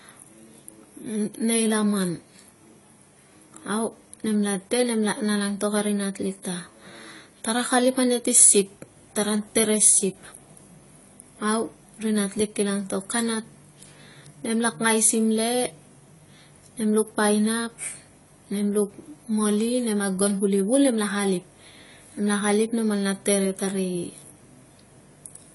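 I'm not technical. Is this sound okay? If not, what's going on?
No, not quite. All the way through, the speech sounds dull and a bit smeary, with a clear fizzy, warbly edge on hissy sounds. Nothing comes through above 11.5 kHz. That's likely AAC compression, squeezing the file hard and throwing away detail.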